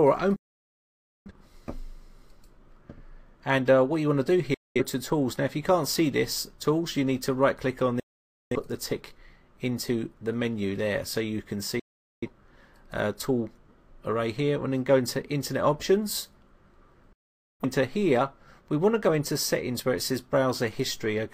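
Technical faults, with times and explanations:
0.36–1.32, 4.54–4.81, 8.00–8.56, 11.79–12.28, 17.13–17.65 s, digital broadcast dropout: the receiver muted on bad frames, so sound fades out within 3 ms and leaves silent gaps of 0.21–0.90 s.
10.34 s, dropped samples: a single sharp click, likely from a fraction of a millisecond of samples going missing, which makes the waveform jump abruptly.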